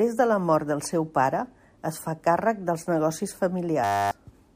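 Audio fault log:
3.84–4.11 s, system hang loop: the playback froze while the sound hardware kept replaying one 10 ms slice of speech about 27 times, so the sound collapses into a steady buzz at 100 Hz instead of a stutter. Roughly a third of a second of real audio is lost. On a waveform the same 10 ms cycle repeats exactly. On a spectrogram the band becomes evenly spaced horizontal lines at multiples of 100 Hz.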